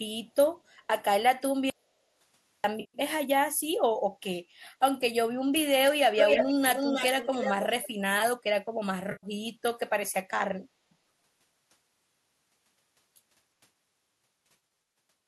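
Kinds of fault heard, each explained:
Audio dropout to silence, 1.70 to 2.64 s: the sound cuts off mid-flow for about 0.94 s into total silence with no room tone, then resumes. The likely cause is lost input, such as a disconnected device or stray mute, while silence kept being written.
AAC frame loss with concealment, 2.80 to 2.98 s, 9.12 to 9.27 s and 14.45 to 14.79 s: lost frames were patched from the last good spectrum, giving smeared, noisy patches of about 140 and 110 ms, then a 0.5 s stretch of scattered brief losses.
Echo leak, 6.17 to 6.51 s and 6.68 to 7.89 s: a copy of the sound returns 310 ms late, first at roughly full level, then somewhat quieter, about 5 dB down. This is likely a loudspeaker's output reaching a microphone that the echo canceller failed to suppress.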